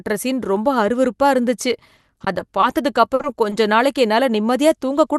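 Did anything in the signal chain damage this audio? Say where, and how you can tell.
Yes. The damage is in the network and jitter-buffer stage of a call path. The codec's coding noise and high-frequency ceiling near 12 kHz are part of that path.

Repeated packet loss (robotic sound) runs from 1.97 to 2.65 s. Seven short holes, none longer than about 20 ms, arrive in quick succession. Each is patched by extending the preceding sound, so about 18% of the stretch is synthetic fill. About 80 ms of real audio is lost. The repeated looping of the last pitch period gives the choppy texture.

A short stall from a late packet appears twice. From 3.15 to 3.22 s a sound is held for 50 ms, and from 3.50 to 3.56 s one is held for 20 ms. In each case the jitter buffer ran dry, so the receiver stretched the last sound while waiting and then resumed where it left off. Nothing goes missing. After the second stall, about 11 ms is trimmed to catch up. 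Each stall is heard as a sound held too long, with a slight buzz or dip.

A short concealed packet loss follows the first stall directly, from 3.22 to 3.26 s. Here 20 ms of audio never reached the decoder, and the receiver synthesised a continuation before crossfading back into the real signal. It is heard as a brief smear or wobble.

A jitter buffer speed-up runs from 4.46 s to 5.13 s. The buffer had built up excess delay, so the receiver repeatedly cut out short stretches of a pitch period or so, removing around 40 ms in total. Playback runs at 105% speed with the pitch unchanged. That is why the closing phrase sounds slightly hurried.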